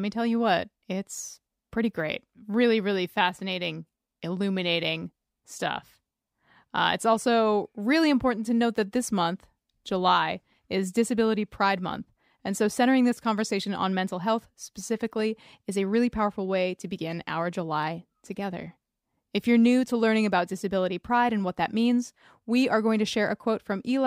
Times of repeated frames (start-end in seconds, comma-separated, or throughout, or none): none